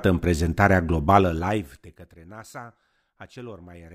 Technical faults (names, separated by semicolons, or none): zipper noise